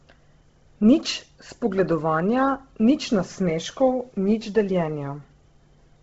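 The audio was likely squeezed through Bluetooth LC3 compression at a very low bitrate, which fits a setting near 16 kbps with 10 ms frames. From start to finish the codec discards much of the upper spectrum and fills the gaps with synthetic noise, so the speech carries a breathy, grainy edge and a heavily processed texture. Nothing survives above about 7.7 kHz, leaving the sound noticeably dull and band-limited throughout.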